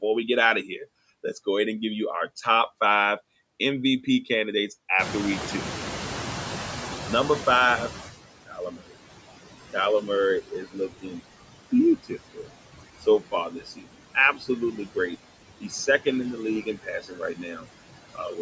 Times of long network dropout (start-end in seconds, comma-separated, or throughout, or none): none